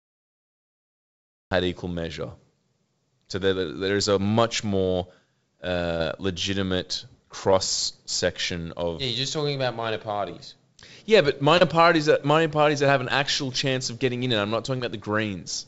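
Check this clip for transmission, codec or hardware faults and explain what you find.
Two faults are present: a cut-off start and five short concealed packet losses. The speech comes through a call path with nothing above 8 kHz, which fits G.722 at 64 kbps.

The cut-off start runs from 0.0 to 1.51 s. The stream began late. The first 1.51 s are digital silence. Speech then appears abruptly in the middle of a sound. There is no natural attack or fade-in. The cut leaves a hard edge at 1.51 s, where the sound switches on instantly.

Short concealed packet losses occur at 5.98 to 6.01 s (20 ms), 7.51 s (10 ms), 10.28 s (10 ms), 11.58 to 11.62 s (30 ms) and 14.78 to 14.80 s (20 ms). In each gap, audio failed to reach the decoder in time. The receiver filled the hole by extending the last sound, then blended back into the real signal. Each one is heard as a brief smear or wobble.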